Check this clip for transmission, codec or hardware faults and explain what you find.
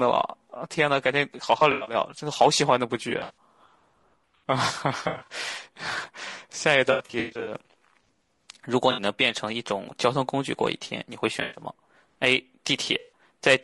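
Two faults are audible in this speech: codec damage throughout, and repeated dropouts patched over by concealment.

Low-delay AAC compression runs through the whole clip. The speech sounds rough and grainy, with noise filling the gaps between harmonics and a thin, synthetic top band. The short transform frames resolve pitch poorly, which likely points to AAC-ELD at around 32 kbps. On a spectrogram, the harmonic lines look blurred and speckled, and the high band looks patchy.

AAC frame loss with concealment occurs at 1.59–1.95, 3.09–3.34, 5.03–5.33, 6.91–7.55, 8.91–9.01, 11.41–11.62 and 12.99–13.12 s. The decoder rebuilt missing frames from the last good spectrum, which produces smeared, noisy, phasey patches. The longest stretch, at 6.91–7.55 s, has 340 ms lost, with single runs up to about a tenth of a second. On a spectrogram these patches show as frozen, smeared blocks.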